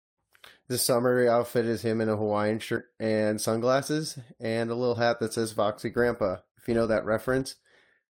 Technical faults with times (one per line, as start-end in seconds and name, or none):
5.88-8.18 filter restarted on every block